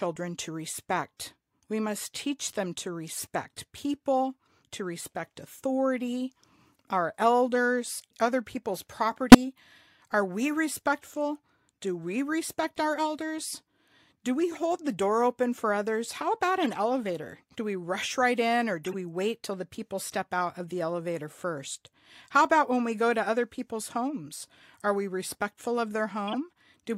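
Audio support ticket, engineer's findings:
Short chirps and noise bursts in the speech, 47 to 110 ms each: 3.16 s, 9.32 s (after "our elders other people's", near full scale), 14.53 s (before "the door open for"), 16.62 s, 18.84 s, 26.28 s (after "we respectful of"). Corrupt frame decoded at the codec decoder. Flipped bits in a few frames each, played anyway. Misread gains and codes put energy at the wrong frequencies for each damaged frame's length.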